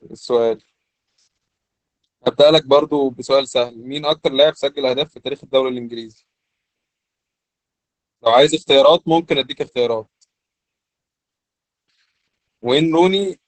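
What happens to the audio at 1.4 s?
At 1.4 s the speech sounds muffled, hoarse and faintly robotic, with nothing above 8.5 kHz, as it does throughout the clip. This is Opus voice compression: a speech-oriented linear-prediction coder confines the band to wideband and codes the excitation coarsely, which fits a bitrate near 10 kbps.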